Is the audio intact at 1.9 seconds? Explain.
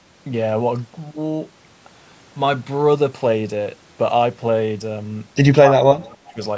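Yes, the speech at 1.9 s is intact, carried cleanly through the call microphone processing with no fault at that moment.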